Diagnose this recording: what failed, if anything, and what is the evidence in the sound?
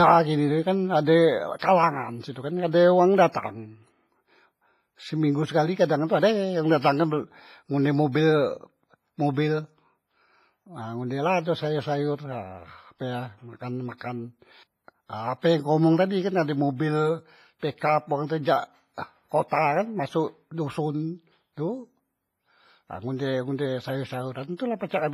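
The codec stage failed. The speech was most likely squeezed through WMA compression at a low bitrate, with heavy damage that fits something around 24 kbps. Nothing survives above 15.5 kHz, and the whole clip has a ringing, washy character with a hiss that swells and fades along with the talking. Long transform blocks smear the quantisation noise across tens of milliseconds, and at this rate the weaker spectral lines are simply discarded.

Pre-echo, also from the codec stage, shows up twice: from 1.59 to 1.62 s and from 13.98 to 14.01 s, each spreading about 32 to 33 ms ahead of a sharp onset. In both places a brief hiss arrives before the attack, and the attack itself comes out softened. The encoder spreads noise evenly across a block, so when a loud transient lands late in it, noise sized for that transient fills the quiet stretch just before.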